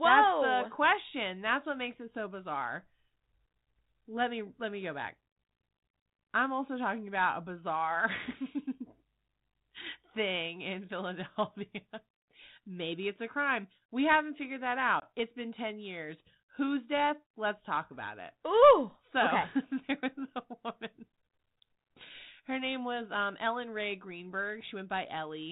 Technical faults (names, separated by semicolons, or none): packet loss on an ADPCM call